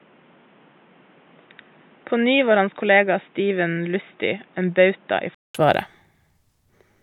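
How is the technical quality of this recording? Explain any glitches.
The recording has one fault, an input switched to a poorer device. From 0 to 5.55 s the speech is dull and boxy with nothing above 3.8 kHz, about 5 dB quieter, over a different background noise about 35 dB down, likely from a narrowband microphone. A 200 ms silence and an abrupt return to full brightness mark the switch, which a simple filter wouldn't produce.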